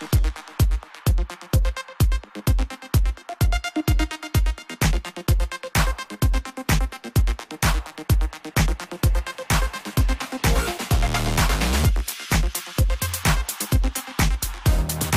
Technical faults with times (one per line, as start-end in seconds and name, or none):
none